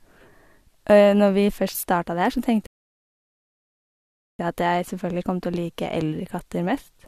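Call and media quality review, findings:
Rebuffering stall, 2.67–4.39 s: speech halts after "det her så", silence about 1.73 s, resumes cleanly at "jeg at jeg selvfølgelig" with nothing skipped. Player buffer underrun; playback paused awaiting data. Waveform: flat silent gap; spectrogram: blank column, no tails.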